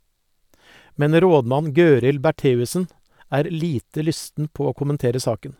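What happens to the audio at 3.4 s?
At 3.4 s the speech carries on cleanly, with no dropout, click, distortion or other fault at that moment.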